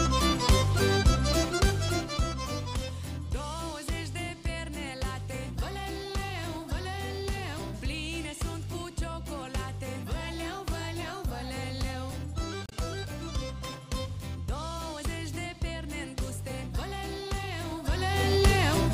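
At 12.66 to 12.73 s, damaged data in the compressed stream makes the decoder lose frame sync, producing a brief glitch before decoding resumes.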